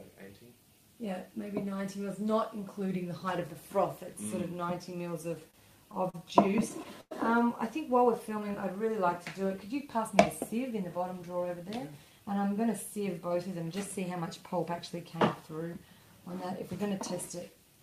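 Between 5.31 s and 7.13 s the audio shows repeated stalls (stutter): ten separate gaps where playback halts and the receiver extends the last sound until more packets arrive. The held segments total 235 ms, the longest 101 ms, or about 13% of that stretch, and nothing is actually dropped. The cause is packets arriving late or slower than real time, so the jitter buffer kept draining and the output dragged in a broken rhythm. At 8.29–8.78 s a jitter buffer slow-down stretches the audio to 91% speed with pitch unchanged. The receiver inserts repeated copies of single pitch periods or fragments of pauses, adding 49 ms to that half-second, which draws sounds out. This happens when the buffer runs low or its target delay has just been raised, and the extra material rebuilds a reserve. From 10.71 s to 12.31 s the opposite occurs, a jitter buffer speed-up at 107% speed, again with pitch preserved. 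Here the buffer held more than its target, as when delayed packets arrive in a burst. To shrink the latency the receiver cut short pieces of one or a few pitch periods over and over, removing around a tenth of a second in total, which makes that passage sound hurried.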